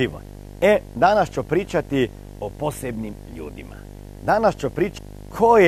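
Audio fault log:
throughout: video or display buzz. A 50 Hz buzz with harsh hash riding above it sits under the speech, roughly 15 dB below it, plus a whine at 15.6 kHz. That high line-rate tone separates it from ordinary mains hum, pointing to a screen or video cable coupling in.
4.97 s: stream segment skipped. The speech jumps abruptly forward with a small blip, as if a stretch of the programme is simply missing rather than muted or repeated. This likely comes from a stream segment failing to load and the player continuing with the next.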